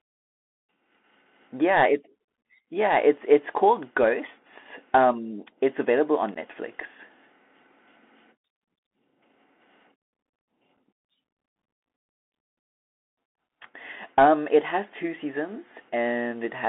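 Throughout, the speech passes through a Bluetooth CVSD headset codec, whose one-bit adaptive-step coding limits the band to roughly 250 Hz–3.5 kHz, consistent with a 64 kbps link. Loud high sounds overrun the step and distort, sibilants turn scratchy, and a granular hiss sits underneath. At 6.35 s, unconcealed Bluetooth headset packet loss drops about 11 ms of audio, a few packets replaced by silence or an idle pattern, leaving an abrupt hole. The same fault recurs at 10.77 s, a shorter gap of about 7.5 ms from a couple of lost packets.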